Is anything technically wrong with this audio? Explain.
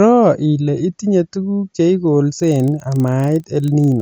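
Yes. A resampler restarted on every block affects the speech from 2.32 s, just after "ile itinye tuguk che", to the end. Each 40 ms block was converted from 16 kHz to 48 kHz in isolation, so every block edge carries a small error, heard as a regular 25 Hz ticking buzz under the signal.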